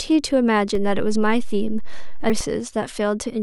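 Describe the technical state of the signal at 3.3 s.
At 3.3 s the speech signal is intact, with no audible technical fault.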